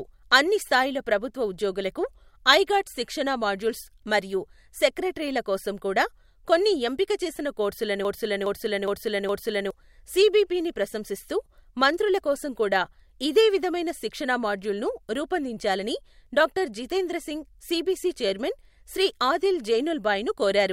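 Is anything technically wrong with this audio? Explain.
Yes. From 8.05 to 9.71 s, right after "కొన్ని ఎంపిక చేసిన కోర్సులను", the speech falls into a broken-record loop: one 414 ms fragment plays four times back to back, identical each pass, before the audio resumes at "సిబిపిని ప్రశంసిస్తూ మంత్రుల కోసం". The likely cause is a stalled player or stream re-sending its last buffer, so whatever should have played there is gone. Unlike an echo, the repeats don't decay or overlap; each copy is full-level and exact.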